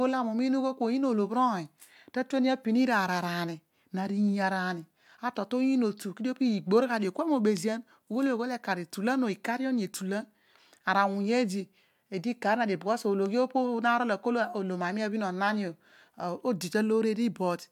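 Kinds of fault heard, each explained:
No kinds of fault are heard in the speech.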